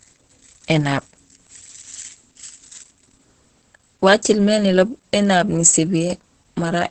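Heavy Opus voice compression runs through the whole speech clip. The SILK coder, at a rate that points to roughly 10 kbps, codes the excitation coarsely and cuts the band, leaving nothing above 8.6 kHz. The voice sounds muffled, hoarse and slightly robotic throughout.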